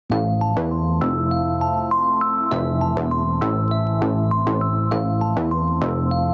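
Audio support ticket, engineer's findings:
Level breathing around 10 dB throughout, dynamics squashed. Gain pumping, likely from input gain set far too high, with a fast limiter/compressor clamping on every peak. Call mic processing band-limited, nothing above 8 kHz.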